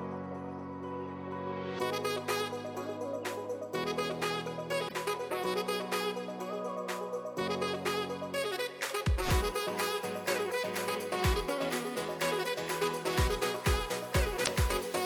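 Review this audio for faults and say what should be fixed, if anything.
Damaged data in a compressed stream shows up twice, from 4.85 to 4.92 s and from 14.41 to 14.48 s. Each is a brief blip. Corrupted bytes make the decoder misread frames and lose sync until it finds the next header. Re-fetch or checksum the file so damaged frames are caught before playback.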